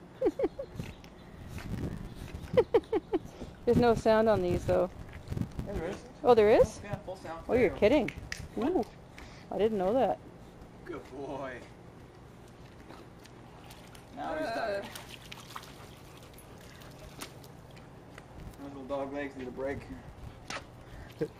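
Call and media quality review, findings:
Filter restarted on every block, throughout. Buzz at 345 Hz that follows the signal's level. Probable component: per-block filter stage. Filter state is cleared each block, so every block starts with a small transient. The rate fits a 128-sample block at 44.1 kHz.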